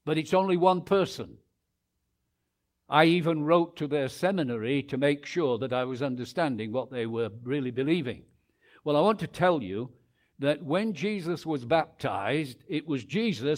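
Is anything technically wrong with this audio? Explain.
No, nothing technically wrong can be heard here.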